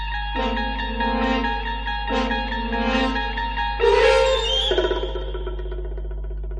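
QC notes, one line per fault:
Throughout: mains hum, a steady low tone at 50 Hz sitting under the whole clip, strong enough to rival the wanted sound at only a few decibels below it. It never changes pitch or level, which points to electrical pickup rather than anything acoustic. A ground loop or a transformer close to the cabling would couple the 50 Hz power supply straight into the signal path, leaving this constant drone.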